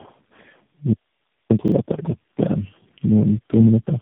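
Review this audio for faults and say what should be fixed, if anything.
Tandem speech coding runs through the whole speech clip. The sound is rough, muffled and warbly, with nothing above 3.8 kHz. That degradation fits about four speech codecs in a row, ending in AMR-NB, each re-encoding the previous one's damage. A single codec at one bitrate sounds cleaner, so the stacked roughness is what sets this apart. To prevent it, carry one codec end to end with transcoder-free operation.

A repeated buffer occurs at 1.68–1.72 s. The same 40 ms piece plays one extra time with a hard join, because fresh audio arrived late and the device replayed what it already held. About 40 ms of new audio is lost. This differs from a dropout or concealed packet loss because the repeat is an exact copy rather than silence or smeared fill. Larger playback buffers or better scheduling would prevent it.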